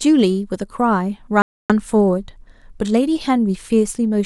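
At 1.42 s, a likely Bluetooth stall, delayed packets starving headphone buffer, drops the speech to silence for about 280 ms, resuming at 1.72 s.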